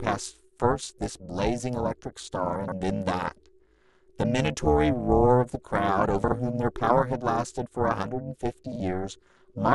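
Overlap-add ripple runs through the whole speech clip: the audio was split into windowed frames and rejoined with overlaps whose gains don't sum evenly, so the level dips by about 60 dB around 400 times a second, giving a harsh, metallic buzz.

Chunks out of order appear at 2.56–2.72 s, where a 40 ms chunk lands three chunks late, and at 6.24–6.32 s and 8.72–8.80 s, where one lands a single chunk late. Each misplaced piece creates hard joins, heard as a brief jumbled stutter.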